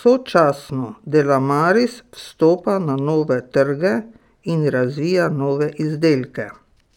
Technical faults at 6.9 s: imaging from linear upsampling

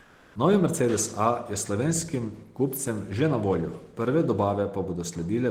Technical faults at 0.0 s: comfort noise in place of the background

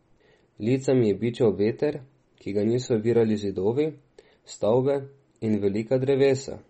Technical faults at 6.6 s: MP3 compression

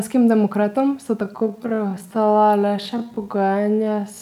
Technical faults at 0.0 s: none

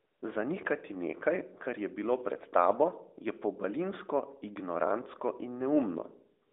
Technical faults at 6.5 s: AMR comfort noise

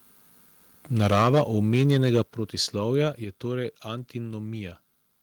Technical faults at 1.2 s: microphone overload; microphone volume stepped down

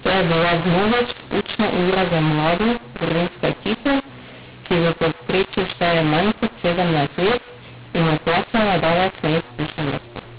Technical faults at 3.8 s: mu-law and A-law mixed up

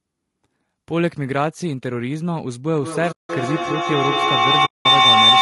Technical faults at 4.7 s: low-delay AAC compression; feedback howl; AAC frame loss with muting

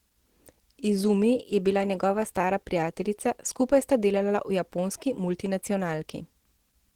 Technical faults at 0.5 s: Opus compression

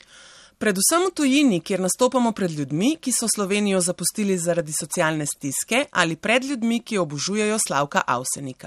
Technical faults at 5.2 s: MP2 compression; DAB burbling

